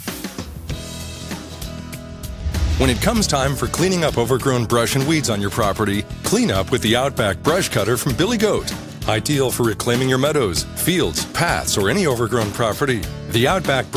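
No technical fault can be heard anywhere in this audio. There is nothing in the sound that calls for a time or a cause.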